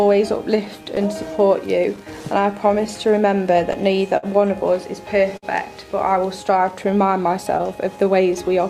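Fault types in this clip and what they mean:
Clock drift between sender and receiver: The sending clock runs about 5% slow against the receiver's, so the buffer keeps draining. This is the underlying cause behind the corrections, not one event. It differs from packet loss because nothing is dropped; timing alone slips.
Scattered short gaps: Isolated packets went missing from 0.13 to 4.26 s, about ten holes totalling roughly 150 ms, the longest around 50 ms. From 6.57 to 8.57 s there are about four more, each tiny. Each is patched by continuing the preceding sound, giving brief ticks or smears.
Repeated timing corrections: From 0.65 to 8.49 s the receiver repeatedly stretches short pieces to keep pace with the slower sender. Playback runs at 97% speed, adding about 200 ms overall. The edits all lengthen and are unevenly spaced, so they come across as a slightly unsteady tempo rather than separate dropouts.
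Short stall from a late packet: At 5.37 to 5.46 s a packet arrived late and the buffer ran dry. The receiver held the last sound for 54 ms, then resumed where it left off, adding 54 ms of delay. Nothing is lost, unlike a gap, but one sound lingers too long.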